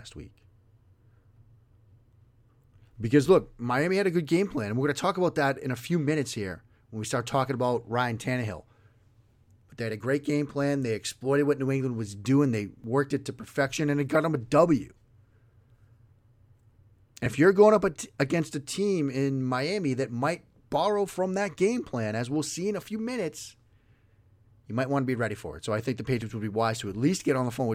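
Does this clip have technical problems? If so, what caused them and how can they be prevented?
Yes. Dropped buffers (overrun) at 12.84 s, 17.26 s and 26.22 s: each is a jump where the speech skips forward with no gap. Roughly 20 ms of sound goes missing at 12.84 and 26.22 s, and about 70 ms at 17.26 s. The likely cause is the recording software falling behind, so the interface overwrote unread audio. Larger buffers and a lighter system load during capture prevent it.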